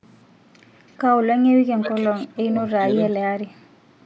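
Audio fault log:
0.88–0.92 s, echo leak: A faint, delayed copy of the speech slips in for a brief moment. It trails the original by 329 ms and sits roughly 40 dB below it, so it is barely audible. The likely cause is a loudspeaker on the far side feeding its microphone, with the echo canceller failing to remove all of that pickup before sending it back.
1.43–2.55 s, 2.75–2.84 s, 3.13–3.17 s, speech suppressed in double talk: The speech level dips in pieces. The first stretch is the worst, with gaps adding up to about a second and drops as deep as roughly 35 dB, so parts nearly vanish. The second is a short dip of around 15 dB. The third is a slight dip of a few decibels. This is likely an echo canceller mistaking overlapping talk for echo and turning it down.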